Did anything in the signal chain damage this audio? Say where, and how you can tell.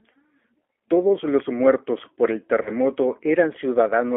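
Yes, at the codec stage. The speech carries G.729 coding throughout: a narrow band with nothing below about 300 Hz or above 3.4 kHz, and a plainly audible rough, slightly synthetic texture, which fits an 8 kbit/s G.729A stream. The codec rebuilds each 10 ms frame from a vocal-tract filter, a pitch predictor and a few sparse pulses. On a spectrogram, energy stops hard at those band edges, and harmonics look smeared rather than finely resolved.

At the network stage, there is VoIP packet loss concealed by the speech codec from 2.63 to 2.71 s. About 30 ms of audio went missing, which fits a single lost packet. The decoder stretched its last pitch and filter into a buzzy tone or coloured noise that fades, and because each frame builds on the previous one, the sound stays weak or distorted past the gap. On a waveform, amplitude sags and turns unnaturally periodic. On a spectrogram, harmonics flatten into steady horizontal lines before recovering.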